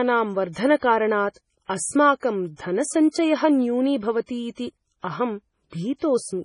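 MP3 compression artefacts run through the whole speech clip. The treble stops abruptly at 10.5 kHz, and the heavy damage points to a very low bitrate, around 24 kbps, as the likely cause. Starved of bits, the encoder discards everything above that cut-off and zeroes weaker frequency lines, which flicker on and off between frames. The result is a watery, swirling texture, with metallic chirps on s sounds and softened, smeared consonant attacks.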